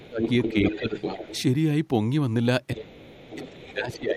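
Speech clip with two echo-control faults. Speech is suppressed in double talk at 0.00 to 0.22 s, 0.53 to 0.96 s and 2.74 s to the end. It dips by up to about 20 dB, likely because the echo canceller ducks both voices. The other side's voice leaks through from 0.06 to 1.42 s, only about 5 dB below the talker. It returns faintly from 2.77 to 3.97 s, likely loudspeaker echo left in the microphone.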